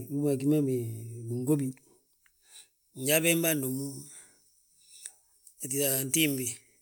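From 1.71 s to the end of the speech, pre-emphasis is left on: a J.17 treble boost applied for transmission was never undone by the matching de-emphasis. The top end sits about 11 dB high at 10 kHz relative to 1 kHz, so the sound turns thin, bright and sibilant.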